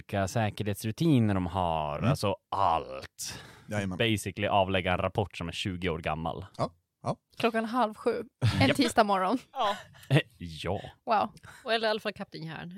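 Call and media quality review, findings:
Compressed frames skipped at 1.98 s. Speech jumps ahead about 20 ms. Decoder dropped missing or damaged frames.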